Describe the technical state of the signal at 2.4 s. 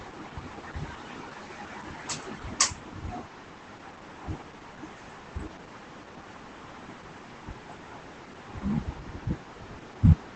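At 2.4 s the speech carries Opus voice compression, present across the whole clip. Nothing sounds above about 8.9 kHz, and the coarsely coded excitation, which fits SILK at roughly 12 kbps, makes it hoarse and slightly robotic, unlike a simple low-pass, which only dulls.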